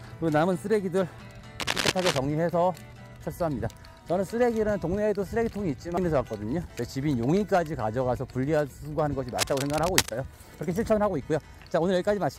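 Cable scratch noise appears from 1.59 to 2.18 s, roughly as loud as the sound itself, and again from 9.38 to 10.16 s, somewhat quieter. Both bursts are dense, uneven scratching, likely from a worn cable or connector whose contact resistance fluctuated as it moved.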